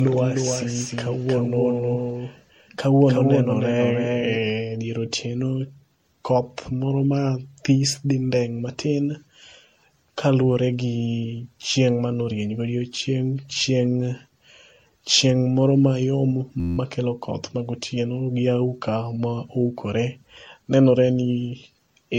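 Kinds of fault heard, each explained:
Generation loss: Repeated lossy re-encoding, likely about seven MP3 passes at 64 kbit/s, leaves the speech swirly, hollow and smeared with soft attacks. A spectrogram shows nothing above 16.5 kHz, patchy spectral holes and blurred onsets rather than crisp vertical edges.
Doubled audio track: A second full-band copy of the speech, about 5 dB quieter and roughly 300 ms late, runs from the start until 4.5 s, likely from a duplicated capture path. The waveform shows each burst repeated, and the copy stops abruptly, with no reverberant tail.
System hang loop: After "chieng moro mayong", an 11.61 ms slice repeats 15 times from 16.60 to 16.78 s, giving a steady 86.1 Hz buzz before "makelo koth magotieno gi" resumes. This fits a 512-sample buffer cycling while the system froze, seen as identical repeating cycles on the waveform.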